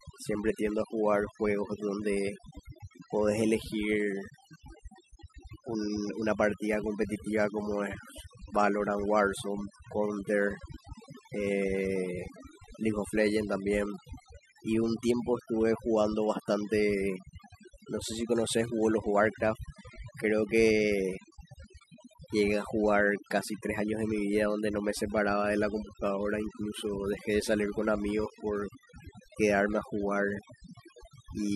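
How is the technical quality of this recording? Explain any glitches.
The recording suffers from overdone noise removal throughout. The noise reducer, set far too strong, shuts off bands near its noise estimate, leaving near-silent gaps with twinkling specks. A spectrogram shows scattered isolated dots and ragged, hollowed-out speech harmonics.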